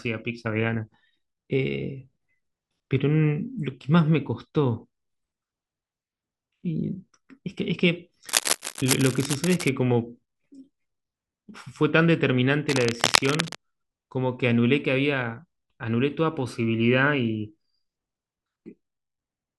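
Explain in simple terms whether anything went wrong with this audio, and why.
Two stretches of harsh scratching and rustling sit on top of the speech, from 8.29 to 9.69 s and again from 12.69 to 13.56 s. The first is a little quieter than the speech, and the second is about as loud as it. This is cable scratch noise, likely from a worn cable, plug or knob being moved so the electrical contact kept flickering, which adds rough bursts of noise.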